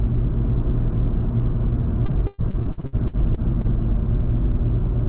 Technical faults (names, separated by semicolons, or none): repeated packet loss (robotic sound)